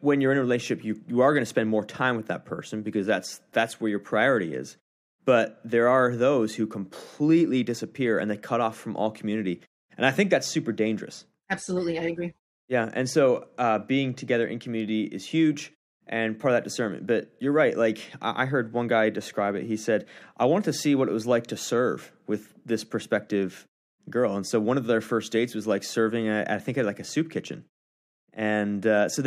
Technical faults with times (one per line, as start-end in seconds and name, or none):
none